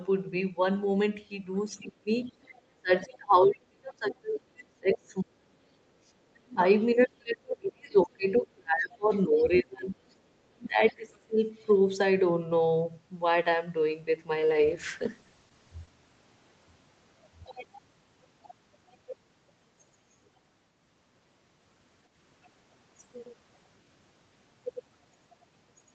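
From 1.8 to 2.09 s the speech dips sharply, by roughly 35 dB at its deepest. The same collapse returns over longer spans from 2.75 to 5.72 s and 6.95 to 9.96 s, and briefly from 6.3 to 6.62 s (near 40 dB down) and 10.47 to 11.39 s. This is speech suppressed in double talk, likely from an echo canceller that, with both parties talking at once, could not tell the near talker from loudspeaker echo and attenuated everything.

Alongside these gaps, faint scraps of a second voice surface: from 2.23 to 2.61 s, from 9.13 to 9.19 s, and from 11.59 to 11.63 s. They sit far beneath the main speech, roughly 30 to 40 dB lower. This is the other side's voice leaking through, likely because the far end played on a loudspeaker was only partly removed from the microphone pickup.

From 14.41 to 15.97 s the sound turns rough and muffled, losing the clarity it has elsewhere, where the Opus call path passes content up to 8 kHz. 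This is a call bitrate drop. The bandwidth estimate fell and the encoder went from 32 kbps to 10 kbps, staying at the bottom for about 1.5 s. At that rate it quantises coarsely and trims the high frequencies until the bitrate recovers.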